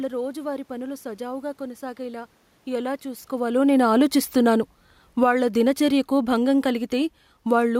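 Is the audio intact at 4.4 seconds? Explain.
No, at 4.4 s you're in the middle of an automatic gain falling stretch that runs from about 2.70 to 7.75 s, starting right after "రోజువారీ పనులు సజావుగా కొనసాగేలా". The AGC found the input too loud, or its background noise too strong, and eased its gain down by about 9 dB, so the speech and the room noise behind it sink together.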